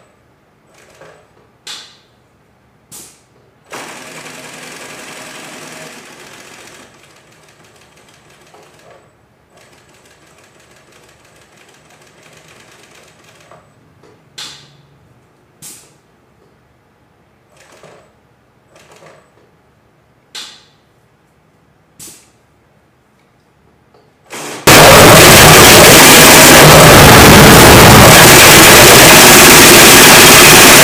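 From 24.67 s to the end at 30.84 s, the audio turns into very loud, harsh distortion, with quiet moments blasting out as strongly as everything else. The likely cause is signed and unsigned mixed up in the 16-bit samples: reading them with the wrong sign convention flips the top bit, so each pass through zero becomes a leap across the full range.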